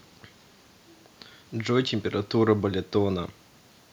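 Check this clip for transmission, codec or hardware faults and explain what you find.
No transmission or hardware fault can be heard in the speech, and the only background is the room's own noise, sitting about 44 dB below the voice as part of the original recording.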